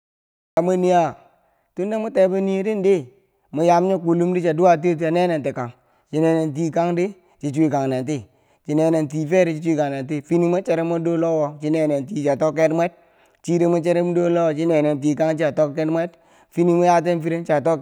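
From 0 to 0.57 s there is digital silence, then a cut-off start: speech enters abruptly mid-sound at "mwe niya tunda mwe", with no natural attack, because capture began late.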